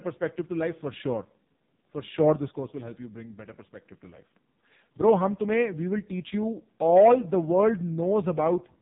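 Speech squeezed through the AMR narrowband mobile codec for the whole clip: nothing above 3.8 kHz, and a heavily buzzy, synthetic quality that fits AMR-NB's lowest 4.75 kbps mode.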